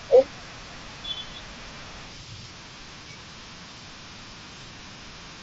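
At 1.81 s, a brief concealed Bluetooth headset packet loss occurs. About 7.5 ms of speech went missing between headset and phone, which fits one lost packet. The receiver filled the gap by repeating a matching stretch of the preceding waveform. Because the gap is so short, the patch is nearly hidden rather than heard as a dropout. The same thing happens again at 4.78 s, also about 7.5 ms long. The wideband mSBC headset codec carries the speech around both points.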